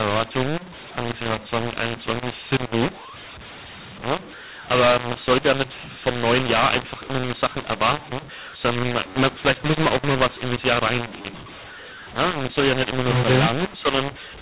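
From start to finish, a mu-law and A-law mix-up: speech encoded as G.711 mu-law is decoded as A-law. Levels scramble, giving harsh distortion and noisy pauses.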